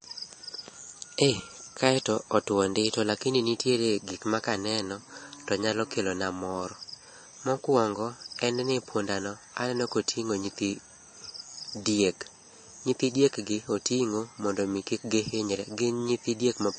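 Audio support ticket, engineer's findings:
Speech, throughout: hard treble cut at 8.3 kHz, watery swirl, smeared attacks. Likely MP3 compression, plainly audible, fitting a low bitrate near 34 kbps. Unlike a plain low-pass filter, weak detail flickers frame to frame instead of rolling off steadily.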